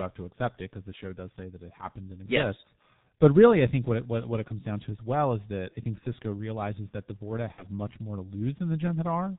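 The whole clip runs through the G.723.1 codec, and it's hit hard: everything above 4 kHz is gone, so the speech is muffled and hoarse, with smeared consonants, which fits the roughly 6 kbit/s rate and the slow-updating voice model.

At about 7.52 to 7.67 s, just before "much more to", you hear VoIP packet loss concealed by the speech codec. About 60 ms went missing, which fits two lost 30 ms frames. The decoder kept extending the last pitch and filter at falling gain, giving a fading smear that stays weak for a moment after the audio returns.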